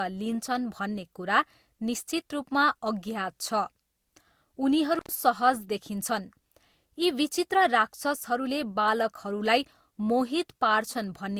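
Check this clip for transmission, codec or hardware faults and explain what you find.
Two faults are present: a layered lossy-codec texture across the whole speech clip, and one brief dropout from a failing connection.

Throughout, the speech carries two overlapping sets of compression artefacts: smeared, swirly high-frequency detail alongside a second, differently grained roughness, with nothing above about 20.2 kHz. This is likely transcoding between lossy codecs, with a Vorbis stage at around 64 kbit/s followed by Opus at around 48 kbit/s. The second encoder spends bits re-coding the first one's artefacts and adds its own. A single low-bitrate encode would show only one artefact character, not two mixed together.

From 4.95 to 5.12 s there is an intermittent contact fault. A loose plug or cable briefly opens, and the sound cuts out for about 96 ms, leaving only faint hiss, with a crackle at each edge as the contact breaks and remakes. 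The crackly edges and residual hiss set it apart from a clean packet-loss gap, which goes silent or is smoothly concealed.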